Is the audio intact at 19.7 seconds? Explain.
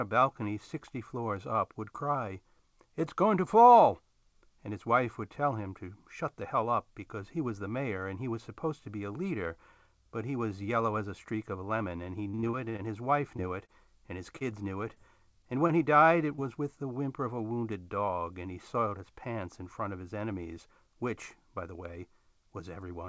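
Yes, the audio is intact at 19.7 seconds, with the speech passing through the call path as expected and its band ending at about 8 kHz, which fits a wideband codec such as G.722.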